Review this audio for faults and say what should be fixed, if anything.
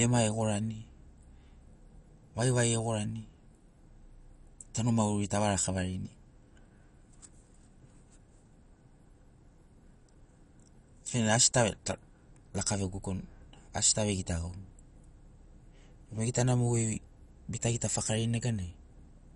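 The whole clip has a dull, gurgling, grainy edge, and nothing comes through above about 11.3 kHz. That's most likely MP2 compression at a low rate, around 48 kbps, starving the sub-bands so the upper ones drop out and the rest get coarsely quantised. To prevent it, encode from the original at a much higher bitrate or use a more efficient codec.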